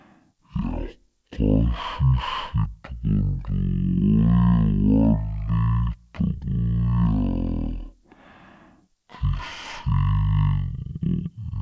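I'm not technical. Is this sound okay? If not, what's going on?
No. This speech has a wrong sample rate problem from start to finish. It plays at roughly a third of its proper speed, and the pitch drops by about 17.6 semitones, well over an octave, so everything sounds deep, slow and dragging. That fits audio recorded at 44.1 kHz being played back as if it were 16 kHz. Slowed speech that keeps its normal pitch would point to a different fault, but here speed and pitch fall together.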